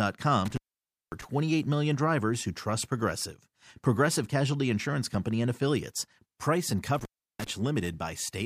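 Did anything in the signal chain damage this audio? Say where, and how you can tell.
Yes, an intermittent contact in the analogue wiring. The speech cuts out with crackly edges from 0.45 to 1.24 s, just before "million drivers who trust", and again from 6.95 to 7.51 s. A loose connection opened for about 0.54 s and 0.34 s. Faint hiss during the gaps, rather than digital silence, sets it apart from a network dropout.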